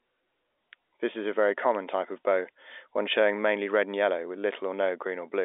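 Nothing's actually wrong with this bit of speech; it has simply come down a G.711 telephone line, so the sound stops at about 3.8 kHz the way an ordinary phone call does, and there's no fault to point at anywhere in it.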